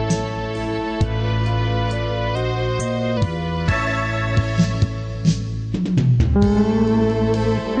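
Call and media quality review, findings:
Drift correction step, 2.35–3.17 s: sound runs about 6% fast, pitch up about 102 cents (roughly a semitone), then snaps back. Likely clock-sync resampler stepping rate to rebalance buffer. A single flat step, unlike wow's gradual wobble.

Periodic USB or driver dropouts, 4.44–6.64 s: ticks every 0.1 s, around twenty, each a sub-millisecond skip with no fill. Bus or driver stalled by a timed background task. Metronome-even spacing and presence only under signal separate it from network packet loss.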